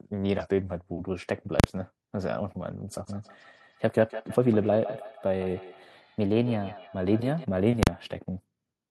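Speech clip with three kinds of fault. A drift correction step shows up twice. From 0.42 to 1.05 s playback slows by about 6% and pitch drops by 106 cents, just over a semitone. From 5.96 to 6.77 s it runs about 6% fast and 100 cents sharp. Speed and pitch moving together in a sudden step, then returning, is the signature of a clock-matching resampler jumping its rate to refill or drain a buffer, the likely cause of both events. Invalid numbers at full scale occur at 1.60 to 1.64 s and again at 7.83 to 7.87 s. In each 40 ms block a calculation has produced infinite or invalid values, which became the largest positive or negative value, so the output jumps to one extreme value far beyond the speech peaks and is heard as a sharp, very loud bang with no sound inside it. Feedback echo between two devices runs from 2.90 to 7.48 s. Two devices on the same call are sharing one room. One device plays what the other device's microphone sent, that microphone picks it up again and sends it back, and neither echo canceller removes sound it did not play itself. 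The speech returns at a roughly 150 ms interval, reaching about 14 dB below the direct speech at its loudest, with each pass sounding thinner and more ringing.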